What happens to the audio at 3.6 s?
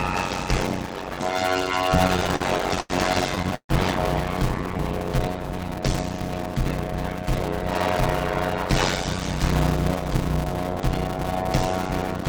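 From 3.56 to 3.71 s there is a call audio freeze, likely because packets were held up in transit and the jitter buffer ran empty. The receiver stretched the last sound into a fading buzz or hiss that decays into about 80 ms of silence. When delivery resumes the audio picks up where it stopped, so 137 ms of gap is inserted, nothing is lost, and everything afterwards plays 137 ms later.

Underneath, and throughout, is a padded block size mismatch. The writing stage delivers short blocks, which fits 256 samples, into larger read blocks, and the remainder of each block is filled with zeros. The result is a steady 91.9 Hz buzz, with the audio slowed to about 0.53 times normal speed at roughly its normal pitch.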